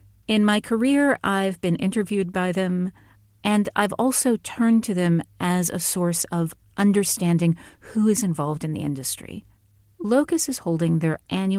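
Nothing in this speech recording points to a technical fault. It has been carried by Opus voice compression at 20 kbps in hybrid mode with full bandwidth kept, and the coding leaves only light traces on the sound.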